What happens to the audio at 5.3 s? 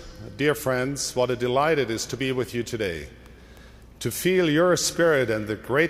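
Nothing goes wrong at 5.3 s; the audio continues intact through that moment with no dropout, click, glitch or other audible fault.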